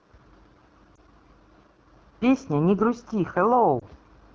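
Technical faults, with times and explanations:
Throughout: AMR wideband (HD Voice) codec, at a rate that sounds like the 8.85 kbit/s mode, one of its two lowest. The codec models speech up to 6.4 kHz as pulse excitation driving a vocal tract filter and fills 6.4 to 7 kHz with shaped noise. At this rate the excitation is coded too coarsely to follow the voice closely, so the speech comes out plainly rough and raspy, with a grainy, buzzy edge on voiced sounds.
0.95 to 0.99 s and 3.79 to 3.85 s: lost AMR speech frames. Each event is a brief dip or warble, consistent with a single 20 ms speech frame failing its checksum after radio errors. The decoder conceals the gap by reusing the last good pitch and vocal tract settings with reduced gain, so the sound smears briefly instead of cutting out. It then returns momentarily weak or rough while the decoder recovers.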